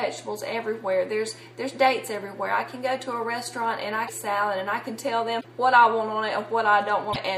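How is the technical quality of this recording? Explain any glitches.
Three short glitches interrupt the recording, at 4.06 to 4.10 s, 5.40 to 5.45 s and 7.12 to 7.16 s. Each is a brief garbled blip where the audio jumps ahead. The likely cause is a broken MP3 bit reservoir: frames about 26.1 ms long were lost, so the next frame reached back for borrowed data and decoded another frame's bytes instead.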